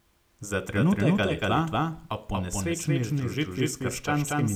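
A second capture path or an out-of-step edit has likely mixed the same speech in twice, producing a doubled audio track from 0.75 s to the end of the clip. The copy trails the original by a fixed 200 ms and sits at about the same level, so every syllable is followed by a full-band repeat. It cuts in abruptly at 0.75 s, and it has no decay or room colour.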